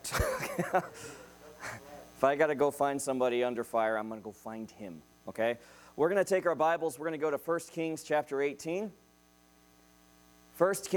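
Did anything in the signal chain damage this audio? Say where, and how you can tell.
No, no damage is audible.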